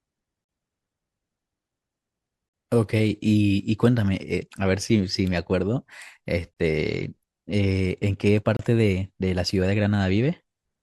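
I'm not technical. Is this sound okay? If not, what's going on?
No. There are four brief dropouts, each a gap between stream segments. The speech arrives in 2-second pieces, and where two pieces don't quite line up, the player fills the space with silence. You hear sharp-edged holes at 0.44, 2.49, 6.54 and 8.57 seconds, lasting about 44, 48, 30 and 27 milliseconds. Nothing is cut from the speech. The gaps only add tiny pauses.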